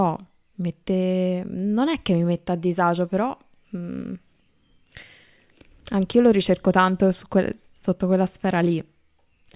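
No technical faults are audible anywhere in the speech recording, and nothing in the signal path calls for attention.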